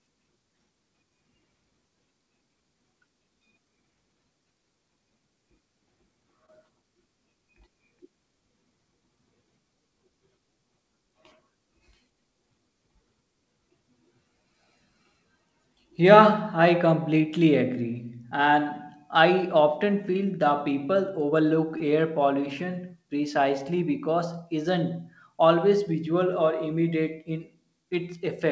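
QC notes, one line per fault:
6.46–6.50 s and 21.78–21.82 s, short concealed packet loss: about 20 ms of audio failed to arrive in time at each point. The receiver bridged the gap by extending the preceding sound for roughly 18–19 ms, then crossfaded back into the real signal, leaving a brief smear or wobble. The second occurs just after "people overlook" and just before "air pollution precisely because". Here a short consonant may be lost, and the bridge sounds band-limited, with nothing above 8 kHz.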